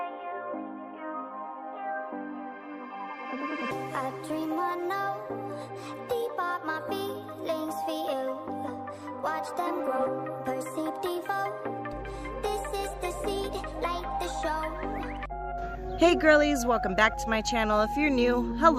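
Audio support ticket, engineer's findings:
Mains hum, 11.93 s to end of clip. Steady 50 Hz tone with low harmonics, strong, roughly 10 dB under the signal. Probable ground loop or nearby transformer coupling the power line into the signal path. Check grounding and cable routing.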